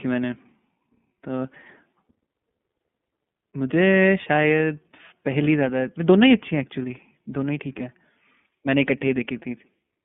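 iLBC codec damage runs through the whole clip. The speech is squeezed into a telephone-style band of roughly 150 Hz to 3.5 kHz, so the upper harmonics and sibilant energy are gone and the low end is thin. Each frame's excitation is coded on its own, which fits 30 ms frames at a low VoIP bitrate near 13 kbps. This leaves the speech intelligible but plainly rough and synthetic.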